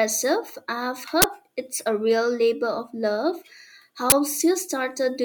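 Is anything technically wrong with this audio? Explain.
Yes. There is an uninitialised buffer fault, heard twice: from 1.22 to 1.24 s and from 4.10 to 4.12 s. Each time, a block of audio was played out before any samples had been written into it. Whatever data was left in that memory came out as sound instead. Each event is a sudden, loud crack lasting 20 ms.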